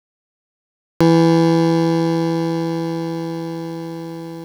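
Cut-off start at 1.01 s: the music enters abruptly from digital silence mid-sound, with no natural attack, because capture began after the sound was already under way.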